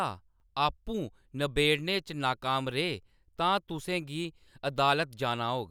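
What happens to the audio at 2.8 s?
Nothing goes wrong at 2.8 s; the speech runs on intact through that point with no dropout, click or distortion.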